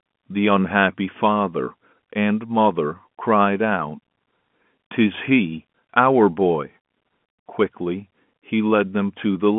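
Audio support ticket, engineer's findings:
No faults found; the speech comes through the G.711 telephone path as expected, with its usual 150 to 3400 Hz line band.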